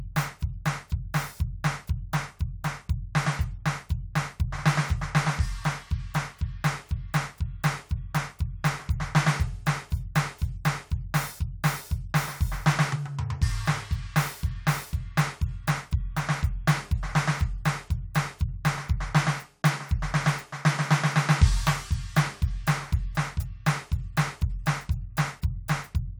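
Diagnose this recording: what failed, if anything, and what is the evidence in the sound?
Nothing failed; no fault audible.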